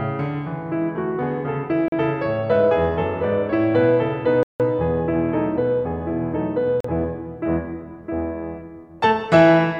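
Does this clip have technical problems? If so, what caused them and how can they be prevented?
Yes. A Bluetooth stall is the likely cause: wireless packets arrived late, the headphones' buffer emptied, and the music cut to silence at 1.88–1.92 s, 4.43–4.60 s (168 ms) and 6.80–6.84 s before resuming. Keeping the phone close and clear of competing 2.4 GHz traffic prevents it.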